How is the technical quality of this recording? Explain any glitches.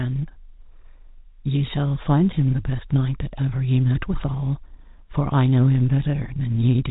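No glitches or faults turn up anywhere in the recording. The speech is carried by G.711 telephone coding, so nothing above about 3.8 kHz comes through, and any quantisation noise riding under the voice is faint at most.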